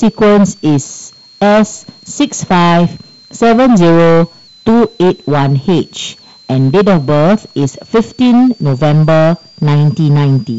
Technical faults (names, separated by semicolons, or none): switching supply whistle; hard clipping